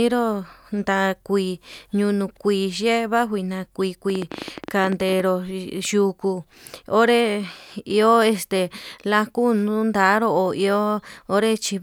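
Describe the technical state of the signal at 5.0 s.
At 5.0 s the speech sits inside a train of clicks that runs from 4.1 to 5.21 s, starting just after "vanjuina kui". Around twenty near-identical pulses arrive at an uneven pace averaging 15.5 per second, peaking roughly 10 dB above the speech and ticking through the gaps as well. The likely source is electrical interference or a faulty connection or power supply. Unlike random crackle, the pulses repeat with a consistent shape and stop after about a second.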